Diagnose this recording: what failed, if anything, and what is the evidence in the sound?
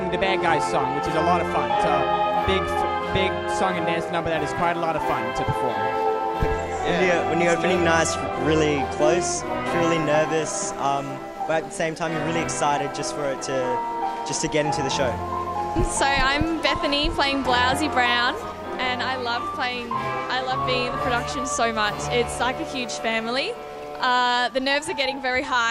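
Nothing failed: no stage from capture through playback leaves any audible evidence of a fault anywhere in the recording.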